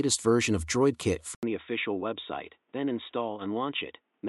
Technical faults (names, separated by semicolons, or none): input switched to a poorer device